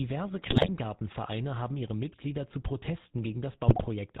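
The GSM full-rate codec shapes the whole clip. The speech sounds buzzy and gravelly, with nothing above 4 kHz, which fits a 13 kbps GSM full-rate stream. The decoder rebuilds the voice from a vocal-tract model fed by sparse, regularly spaced pulses.

From 0.39 to 0.69 s, GSM bit errors break the speech into squawks and gargling. Flipped bits corrupt the filter, pitch and gain values, so each frame's spectrum and level go wrong. The damage returns from 3.68 to 3.88 s, consistent with about 5 percent of bits flipped.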